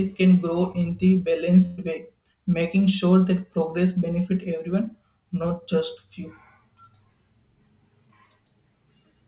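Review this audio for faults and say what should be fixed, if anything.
At 0.72 to 0.76 s, between "can grow" and "in the", there's a short concealed packet loss. About 20 ms of audio never arrived in time, and the decoder papered over it by extending the preceding sound for roughly 18 ms before crossfading back into the real signal. You hear it as a tiny smear or wobble right at that join. A bit more jitter buffer headroom, or FEC on the link, would stop gaps this small from reaching the decoder.

The bigger one is a burst of packet loss from 1.66 to 1.80 s, between "can grow in the" and "way making sure that". Around 120 ms went missing in one go. The receiver kept the last sound going and faded it for about 118 ms, so there's a held, decaying buzz or hiss instead of real audio, then it jumps forward with that stretch gone. Since the band stops at 4 kHz, this fits a narrowband G.711 call, which has no loss protection of its own. 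Redundancy (RED) or a more loss-tolerant codec like Opus with in-band FEC would cover a burst this long.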